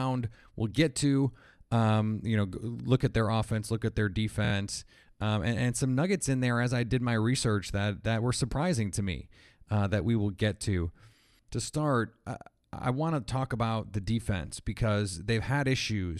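At 4.44 s the speech stutters until 4.52 s: repeated frames, where one short block of compressed audio, about 26.1 ms long and consistent with a single codec frame, is played three extra times. Unlike a dropout, nothing is lost. The same fragment recurs identically, and the speech runs 78.4 ms longer than it should.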